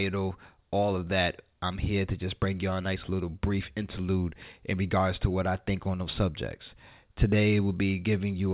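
Nothing stood out on listening to this speech, which comes over a call path whose band stops around 4 kHz, as fits a G.711 mu-law link.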